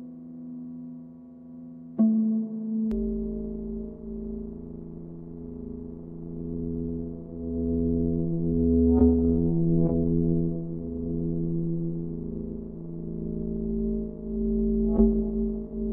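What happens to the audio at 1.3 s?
Nothing goes wrong at 1.3 s; the sound carries on intact through that moment with no dropout, click or distortion.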